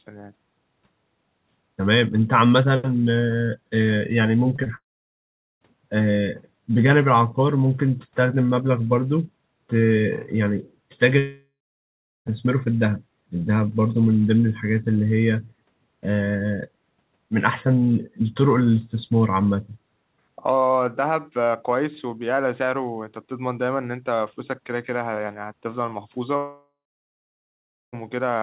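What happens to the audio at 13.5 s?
Nothing goes wrong at 13.5 s: the speech there is intact, with only the band-limited sound of the call path and no dropout, glitch or other fault at that moment.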